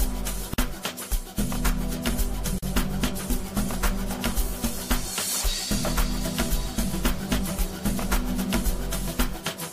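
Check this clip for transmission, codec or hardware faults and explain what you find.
Found two gaps at joins of encoded pieces. At 0.54 s and 2.59 s, untrimmed encoder delay and padding leave 46 ms and 41 ms of silence, with smeared edges, before the sound resumes.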